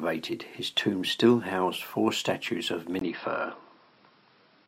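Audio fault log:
2.99–4.67 s, input switched to a poorer device: after "housed four statues of", a 20 ms gap, then duller, band-limited sound with nothing above 5.5 kHz and a faint added noise floor, likely a change to a narrower-band microphone.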